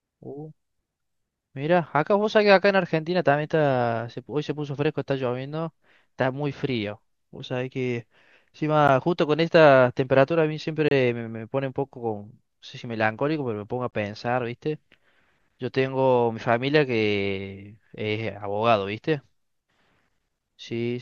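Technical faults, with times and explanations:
1.86, 8.88, 10.88–10.91, 13.91–13.93, 14.93 s: gap between stream segments. Mistimed 1-second segment boundaries leave silence of about 4 to 28 ms, heard as hard-edged dropouts; no audio is lost.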